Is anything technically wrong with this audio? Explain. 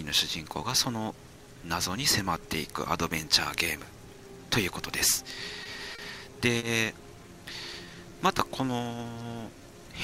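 Yes, there are two kinds of timing fault.

Three short stalls from late packets occur at 5.63–5.67 s, 5.95–6.00 s and 6.58–6.64 s. Each time a packet arrived late and the jitter buffer ran dry. The receiver held the last sound for 20, 30 and then 40 ms before resuming where it left off. Nothing is skipped, but a single sound lingers with a faint buzz or dip.

A jitter buffer slow-down runs from 7.73 to 9.61 s. To rebuild its reserve, the receiver repeated pitch periods and slivers of pauses, adding about 102 ms. Playback drops to 95% speed at unchanged pitch. Unlike the stalls' isolated holds, this is a drawl across the whole span.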